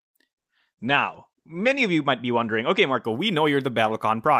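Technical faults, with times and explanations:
0.51 to 3.09 s, call bitrate drop: the speech goes rough and muffled here, as if the encoder suddenly had far fewer bits to spend, which fits a fall from around 40 kbps to about 11 kbps. The top end gets chopped too, with the audio band shrinking from 20 kHz down to 8 kHz, so it sounds dull and a bit watery. It sits at its worst for about 1.3 s before the bits come back and it brightens up again.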